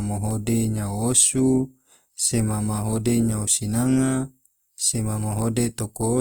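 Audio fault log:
Throughout, Opus compression: the speech has a plainly audible grainy, rough texture, with tonal parts of the sound turning noisy rather than hollow or swirling. This is likely Opus in its music (CELT) mode, which keeps each band's energy but, short of bits, fills bands with folded lower content or noise. The damage points to a low rate near 24 kbps, yet the bandwidth stays full, reaching about 20.2 kHz.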